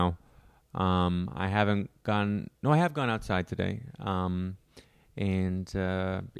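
No technical faults can be heard anywhere in this speech recording.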